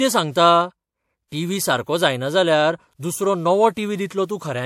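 Transcoding between lossy codecs runs from start to finish of the speech. Nothing is heard above 16.5 kHz, and two distinct layers of coding damage sit on top of each other. The likely cause is an MP3 encode at around 64 kbit/s later re-encoded to WMA at around 96 kbit/s. The second encoder has spent its bits reproducing the first encoder's artefacts while adding its own, so both sets of artefacts are heard together.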